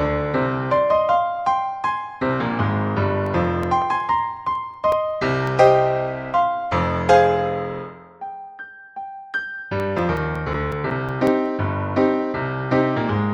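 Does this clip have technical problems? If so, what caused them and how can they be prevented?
Yes. CD scratch ticks at 3.26–5.66 s and 9.80–11.64 s: a surface scratch defeats error correction once per revolution, giving about six brief ticks a second as concealment fails. Prevent it by cleaning or resurfacing the disc, or ripping with a secure, re-reading ripper.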